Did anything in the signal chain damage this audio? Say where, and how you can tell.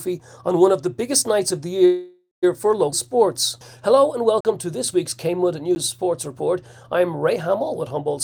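Yes, at several stages.

Network and jitter buffer: a call audio freeze runs from 1.85 to 2.45 s. The last sound is stretched into a fading buzz that ends in roughly 150 ms of silence. The audio then resumes exactly where it stopped, with nothing lost. That pattern means roughly 0.57 s was inserted rather than dropped. The likely cause is packets stalling in transit while the receiver's jitter buffer drained and concealment filled the wait.

Network and jitter buffer: a skip ahead occurs at 2.91 to 2.94 s. Playback jumps forward across a seam only about 12 ms long, and about a tenth of a second of audio is simply gone. The two sides are butted almost directly together. That fits a late stretch being discarded while newer audio was already queued, which also pulls back some of the delay added by the freeze.

Jitter buffer: a jitter buffer slow-down runs from 3.02 to 4.01 s. The pitch holds steady, but the audio plays at about 90% speed, with drawn-out sounds. 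This is the receiver repeating individual pitch periods to rebuild its reserve. Across that second it adds about 106 ms of material, so the timing smears while the tone does not shift.

Driver or buffer: there are two blocks of digital silence, each with no fade. The first starts at 4.41 s and lasts about 43 ms, heard as a brief hole; its length fits a 2048-sample buffer at 48 kHz. The second, at 5.75 s, is about 11 ms and comes across as a tick, consistent with a 512-sample buffer. In both cases the output buffer was likely left zeroed because it was not filled in time.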